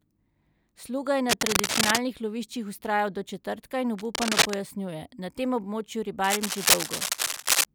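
A worn cable or connector being moved likely causes the cable scratch noise, as its contact resistance jumps around. Dense, ragged scratching bursts sit roughly 5 dB above the speech from 1.29 to 2.00 s, 3.98 to 4.54 s and 6.24 to 7.65 s.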